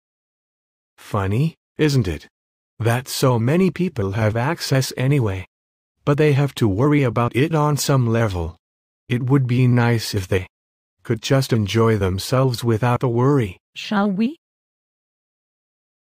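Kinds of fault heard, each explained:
Clock slip clicks: from 0.15 s to 16.14 s, faint ticks recur about fourteen times a second, merging into a soft rattle. Each is one sample dropped or repeated, likely from two unsynchronised clocks drifting apart by roughly 300 ppm, giving around two hundred slips.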